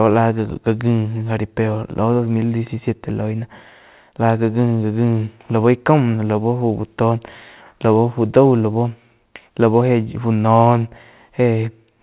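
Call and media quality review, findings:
No faults found in the speech. The call path is audible as narrowband sound with nothing above 4 kHz and the usual coding noise of a telephone codec, consistent with G.711 mu-law at 64 kbps.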